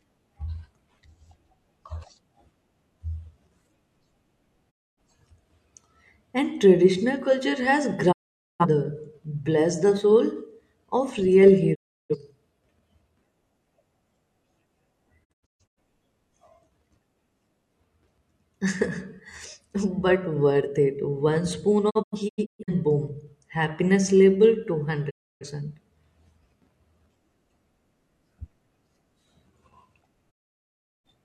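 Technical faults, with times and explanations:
4.70–4.99, 8.11–8.65, 11.74–12.16, 15.23–15.79, 21.89–22.73, 25.09–25.46 and 30.30–31.06 s, digital broadcast dropout: the receiver lost valid frames and muted with quick 20 ms fades, so the speech vanishes for 0.26 to 0.73 s. At 15.23 and 21.89 s it breaks into several short holes, none longer than 128 ms.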